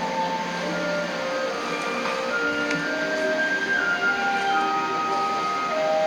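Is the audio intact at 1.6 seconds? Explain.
Yes, at 1.6 seconds the sound plays through intact, with no fault at that moment.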